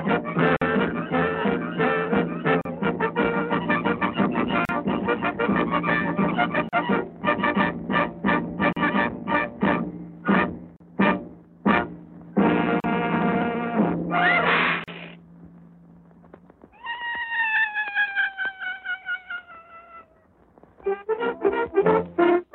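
The audio was encoded in separate pieces of about 2 s and joined without trimming, so each join keeps the encoder's start-up silence and the padding of the previous piece's last frame. The result is a gap at a join of encoded pieces: a silence of 49 ms at 0.57 s, then about 38 ms at 2.61, 4.65, 6.69, 8.73, 10.76, 12.80 and 14.84 s. Each gap has smeared edges, and the sound resumes where it stopped.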